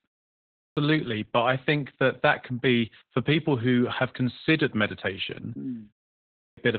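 From the first moment to the last, the speech carries heavy Opus voice compression. The coder sounds like it is in its SILK speech mode. The band stops near 4 kHz, so the voice is muffled and dull. The excitation is coded coarsely, which adds a hoarse, slightly robotic edge. That fits a very low bitrate, around 8 kbps. The damage is steady and never lets up.

At 0.3 s, after about 0.3 s of silence, the speech starts with a clipped start after a pause. About 0.47 s of sound is swallowed, up to 0.77 s. The output seems to fall asleep in the quiet and needs time to wake. The word bursts in abruptly, missing its opening. The same happens at 6.15 s, after a 0.31 s pause. Roughly 0.42 s is lost, to 6.57 s.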